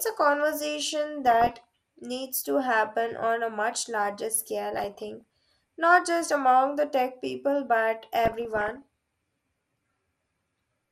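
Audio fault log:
Throughout: MP2 compression. The speech sounds dull and plainly gurgling, with a grainy edge, and the top of the spectrum comes and goes. The likely cause is MPEG Layer II coding starved of bits, consistent with a rate around 80 kbps. The coder divides the signal into 32 sub-bands and shares bits among them. The upper bands get too few and are dropped or flicker in and out, and the bands that remain are coarsely quantised.
1.27–1.64 s, 4.74–5.21 s, 8.25–8.82 s: DAB burbling. Each burst brings short blips of noise in single sub-bands over the speech. Uncorrected bit errors have reached the MP2 data, at a rate well under one percent. Corrupted samples and scale factors make individual sub-bands misbehave frame by frame. Each burst spans dozens of frames, and the third is the longest and densest.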